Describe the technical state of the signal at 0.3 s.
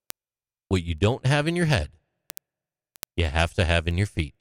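At 0.3 s the signal carries word clock ticks, which run from 0.10 s to 4.35 s. The receiving device is not locked to the sender's clock. The two clocks differ by a few hundred parts per million, so a single sample slips roughly every 70 ms, producing a steady train of ticks over the speech.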